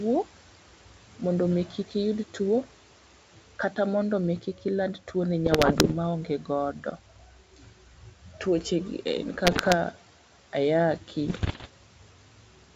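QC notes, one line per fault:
0.25–1.21 s, 1.66–1.95 s, 2.29–2.76 s, 3.37–3.77 s, 4.41–5.15 s, 6.26–8.65 s and 11.0–12.73 s: speech cut by the noise suppressor. The suppressor mistakes quiet parts of the speech for background and attenuates them by up to about 10 to 13 dB, so soft consonants and word tails drop into the room noise, which sits about 21 dB below the speech. Across these spans the affected portions add up to between about 100 and 700 milliseconds each, and about a second within 6.26–8.65 s.
5.46–5.92 s, 9.45–9.75 s and 11.28–11.68 s: bit errors on an ADPCM link. Flipped bits in the G.722 stream, at a rate of around 1.5 to 2 percent, corrupt the decoded samples. Each error also throws off the decoder's adaptive step size and predictor, so the damage rings on for a few milliseconds instead of staying a single click. The result is clusters of pops and rough, gritty bursts with brief jumps in level. 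The last burst falls inside a suppressor dip.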